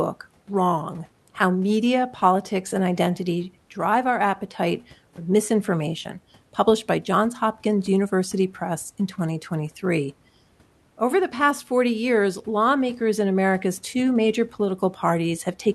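No technical faults can be heard anywhere in this speech clip.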